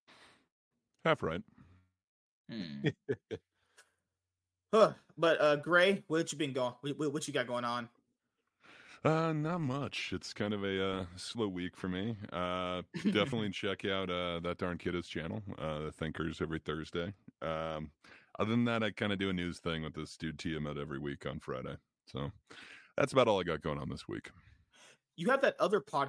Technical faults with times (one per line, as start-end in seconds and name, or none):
none